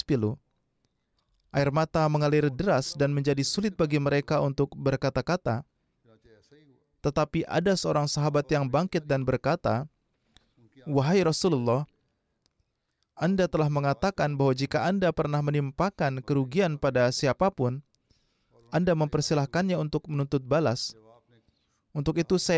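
Listening to this recording of speech, nothing stood out as a technical problem at any point.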